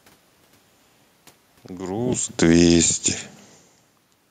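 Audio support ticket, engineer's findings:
Automatic gain falling, 2.28–3.78 s. Level sinks steadily by about 7 dB, room noise dropping with it. Probable component: AGC stage, reading input as too loud and easing gain down. Level shifts near 2.0 s and 3.5 s are talker movement, not system fault.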